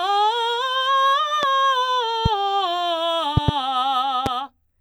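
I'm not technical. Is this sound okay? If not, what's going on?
No. The music has a loud pop at 1.43 s, 2.26 s and 4.26 s, plus a quick double pop from 3.37 to 3.51 s. Each is a sharp thump over the music, which keeps playing. An electrical jolt, likely from a plug, switch or static, causes this.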